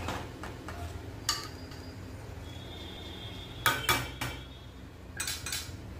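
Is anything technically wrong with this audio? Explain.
Yes. At about 0.46, 1.71, 2.96, 4.21 and 5.46 s there is a stutter: a quarter-second of sound plays again, each lasting 0.25 s. These are overlapping chunks. The audio was handled in 1.0 s chunks, and each new chunk began 250 ms before the previous one finished. That slice is duplicated at every join, so the repeat returns on a steady 1.25 s cycle.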